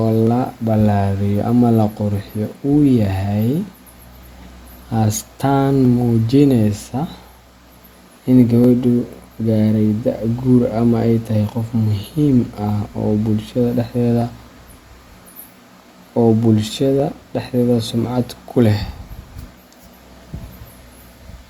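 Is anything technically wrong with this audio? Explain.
Yes. Clock drift buffer slips: from 0.27 to 19.78 s, a click recurs every 2.79 s during the speech. Two independently clocked devices, likely drifting apart by roughly 150 ppm, let the buffer between them creep until a small block of samples is dropped or repeated, producing each click.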